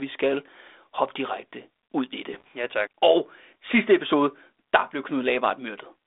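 Bit errors on an ADPCM link strike from 2.33 to 2.48 s. Flipped bits, at a rate of roughly 0.4 percent, corrupt the decoder's adaptive step size and predictor, so each error rings on as pops and rough bursts with brief level jumps over this narrowband G.726 speech.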